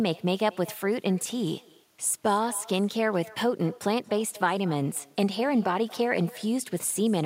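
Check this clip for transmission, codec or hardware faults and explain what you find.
One fault is present. Echo with no canceller runs through the whole speech clip. The far end plays the call over a loudspeaker, its microphone picks it up, and nothing removes it. Each phrase returns about a fifth of a second later, roughly 22 dB quieter and thinner.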